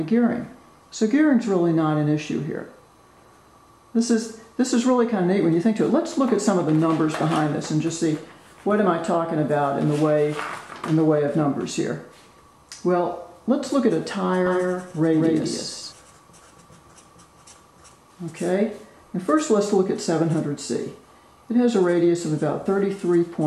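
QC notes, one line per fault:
14.46–15.92 s, doubled audio track: a full-band copy of the sound trails about 200 ms behind, around 5 dB quieter, with no decay or room colour, and cuts in and out abruptly. On a spectrogram every event appears twice at a fixed offset. The likely cause is a slower second capture path or an edit holding two copies out of step.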